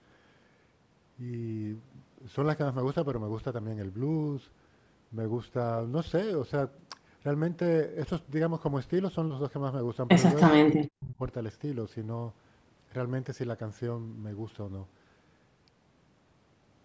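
From 10.47 to 10.54 s the speech dips by roughly 20 dB, then from 10.71 to 11.21 s it falls far deeper, nearly cutting out. This is likely speech suppressed in double talk, with the echo canceller attenuating the talker along with the far-end echo.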